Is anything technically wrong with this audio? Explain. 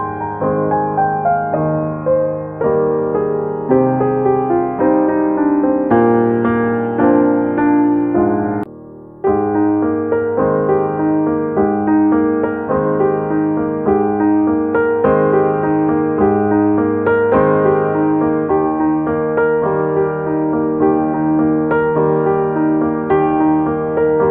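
Yes. There's channel delay (comb filtering) throughout the whole clip. One channel lags the other by a tiny amount, well under a tenth of a millisecond, about four samples. Summed to mono, that cancels fixed frequencies with the first notch near 7 kHz, so the top end sounds thin and phasey.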